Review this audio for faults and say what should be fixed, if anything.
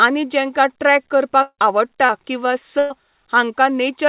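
Long network dropout, 1.42 to 1.60 s, right after "आनी जेंकां ट्रॅक": incoming audio likely stalled, so the last sound trails off as a fading buzz or hiss into brief silence, losing 160 ms.

Short concealed packet loss, 2.06 to 2.11 s: about 40 ms missed the decoder, and the receiver patched it by extending the preceding sound, heard as a brief smear.

Burst of packet loss, 2.79 to 2.92 s: about 120 ms of consecutive audio was lost or late, so the last sound is held and faded without silence before playback resumes past the gap.

Preventing these means a steadier network route with less congestion, plus forward error correction or redundant packets so brief losses can be rebuilt rather than concealed.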